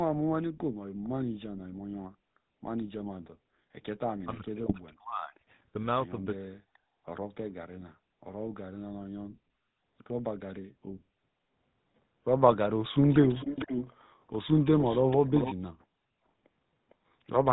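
GSM full-rate codec damage runs through the whole speech clip and is plainly audible. The voice has a buzzy, gravelly roughness, which fits the 13 kbps GSM full-rate codec. That codec rebuilds speech from a vocal-tract model excited by a sparse, regularly spaced pulse train, so natural breathiness and fine texture are replaced by a coarse grain. Nothing above 4 kHz gets through, and the top of the voice sounds dull and boxed in. Below that band edge, the call microphone processing's low-cut can be heard thinning the deepest bass.

Echo leak first shows up at 1.04 s as a brief, faint scrap, very far below the voice. The sound is a delayed copy of the speech arriving 455 ms late. This is likely because a loudspeaker on the far end fed the microphone and its echo canceller let part of that pickup slip back into the call. Another faint scrap follows at 6.74 s. The worst stretches run from 13.02 to 14.01 s and from 14.27 to 15.55 s, where the echo sits only about 10 dB under the speech and trails it audibly. 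One last faint fragment comes at 16.9 s.

GSM bit errors hit from 4.64 to 4.74 s and again from 12.48 to 12.57 s, each bringing squawks, pops and a gargling break in the voice. Corrupted bits reached the decoder, scrambling the filter, pitch and gain values it uses to rebuild each frame. The spectrum warps and the level jumps erratically for a moment. The length of each burst points to three or four damaged frames.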